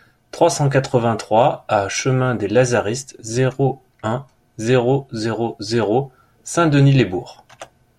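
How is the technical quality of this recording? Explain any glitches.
Nothing stood out as a technical problem on listening to this speech recording.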